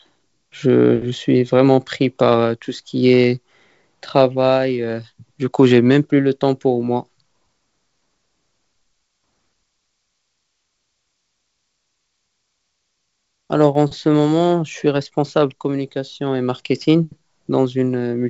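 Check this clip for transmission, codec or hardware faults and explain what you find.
One fault stands out: a single click from dropped samples at 13.75 s. It is a sharp, isolated tick, seen as a thin vertical line through the spectrum. The likely cause is a handful of samples missing from the stream, well under a millisecond of sound. The waveform then jumps straight from one value to a later one. That step is too brief to remove anything audible, so only the click remains. The band limit near 7 kHz and faint upper-band hiss fit G.722 wideband telephone coding at 56 kbit/s.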